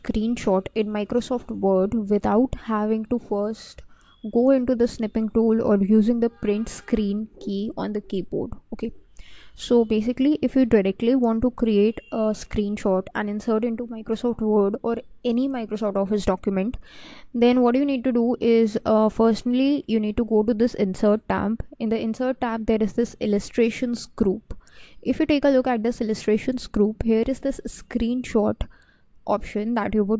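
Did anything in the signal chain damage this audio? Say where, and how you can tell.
No, nothing in the signal chain audibly damaged this audio; its level, timing and continuity hold steady throughout, with no point where any stage leaves a mark on the sound.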